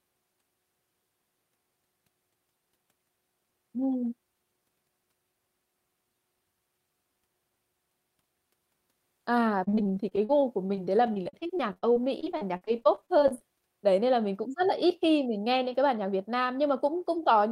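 Speech with repeated packet loss (robotic sound) from 9.63 to 13.42 s: dozens of short gaps, the longest 47 ms, each patched by stretching the preceding sound, covering about 23% of that span. Unlike a single dropout, the holes recur in rapid succession, producing a choppy, robotic texture.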